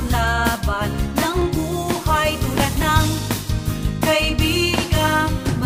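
Clock drift buffer slips begin at 1.42 s and recur about every 1.42 s until the clip ends at 5.65 s, giving roughly four short clicks in the audio at a steady spacing. The likely cause is two devices running on separate clocks: the buffer between them slowly drifts until a small block of samples, on the order of 15, is dropped or repeated. That rhythm fits a clock mismatch of around 200 ppm.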